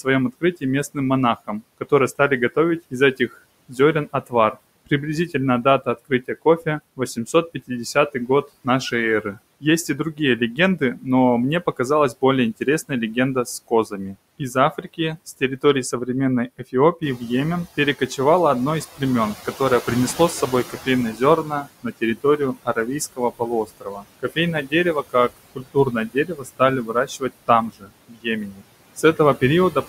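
Noise suppressor artifacts run through the whole clip: the suppressor pulls noise down by about 20 dB frame by frame, so the noise sinks between the words and rises under them. Speech cut by the noise suppressor occurs from 0.04 to 1.92 s, 2.55 to 11.06 s, 11.66 to 17.21 s and 18.96 to 29.88 s. Soft consonants and endings are mistaken for noise and dropped by up to about 16, 19, 17 and 22 dB, totalling roughly a fifth of a second, one second, half a second and three seconds, so they sound swallowed. Around 17 s the room noise jumps by about 11 dB, and the noise suppressor catching up shows from 17.02 to 21.55 s: its noise estimate lags for 4.53 s, letting the louder background through before it sinks to about 14 dB of reduction.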